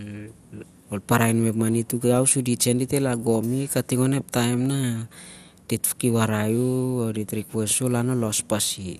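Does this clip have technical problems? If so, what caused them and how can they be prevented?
Yes. MP2 compression throughout: nothing above 15.1 kHz, with gurgling, granular distortion as upper sub-bands flicker off, likely from too few bits, around 80 kbps. Encode at a higher bitrate or use a more efficient codec.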